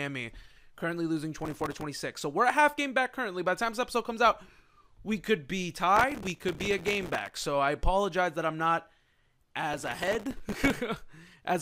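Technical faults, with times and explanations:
1.39–1.83 s, 5.96–7.44 s and 9.74–10.77 s: processor overload crackle. In each burst the processor falls behind on very short audio buffers, around a millisecond and a half each, and misses deadline after deadline. Each missed buffer is filled with a repeat of stale audio whose edges jump against the true signal. Strung together, these hard splices make a gritty, tearing crackle over the sound, longest in the middle burst, that stops as soon as the load eases.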